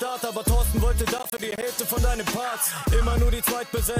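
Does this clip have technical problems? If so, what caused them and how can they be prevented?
Yes: processor overload crackle from 1.18 to 1.63 s. The processor repeatedly failed to finish short audio buffers, around 10 ms each, in time, leaving about fifteen hard-edged gaps of silence that merge into a gritty crackle. Prevent it by reducing processing load or enlarging the buffer size.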